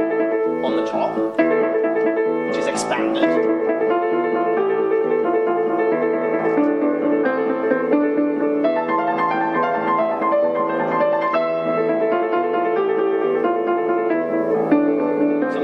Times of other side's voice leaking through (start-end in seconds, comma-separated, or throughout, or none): none